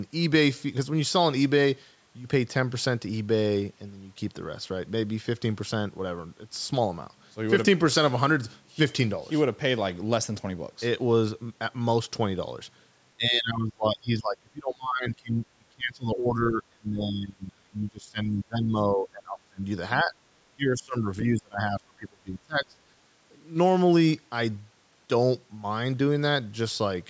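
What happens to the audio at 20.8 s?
The speech drops sharply from 20.56 to 21.07 s. It falls by about 25 dB for roughly half a second. This is speech suppressed in double talk. The echo canceller likely confused the talker with loudspeaker echo and turned both down.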